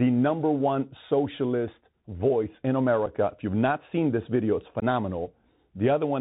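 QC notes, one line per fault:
Throughout: Bluetooth CVSD headset codec. The speech is narrowband and dull, with scratchy s sounds, a grainy hiss beneath it, and distortion on loud high sounds. This fits a one-bit 64 kbps CVSD link whose adaptive step can't keep up, and which passes nothing above 4 kHz.
3.06 s and 4.80 s: unconcealed Bluetooth headset packet loss. Each is a short, abrupt hole, and the speech returns briefly quieter. About 7.5 ms goes missing at the first and 18.8 ms at the second, which points to a couple of lost packets and then several. The gaps were left empty.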